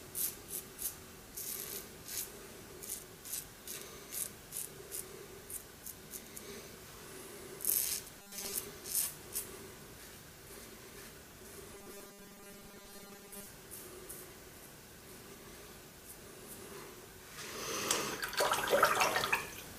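From 8.19 to 8.52 s, and again from 11.73 to 13.47 s, the sound turns into a rigid, metallic buzz. This is robotic sound from repeated short buffers. The buzz sits at a fixed 200 Hz, which points to a 5 ms stretch being replayed over and over. The likely cause is audio arriving too late, so most of the real signal is skipped. The rough shape of the sound still comes through.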